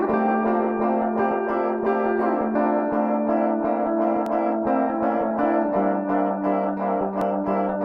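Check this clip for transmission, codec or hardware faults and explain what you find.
The music jumps forward at 1.31 s, 4.26 s and 7.21 s, consistent with audio missing between chunks. At each point roughly 50 ms of material is gone and the two sides butt together without a gap, so the sound skips abruptly rather than pausing. The events fall about 3 s apart, which likely reflects the recording or processing chain handing off fixed 3-second blocks and dropping a short slice at each changeover.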